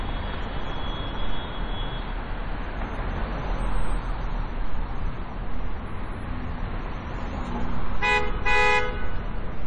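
MP3 compression runs from start to finish. Nothing is left above 10.2 kHz, and the heavy damage, likely from an MP3 encoder at a rate that fits about 32 kbps, zeroes weak frequency lines so the sound turns watery and swirly with smeared attacks.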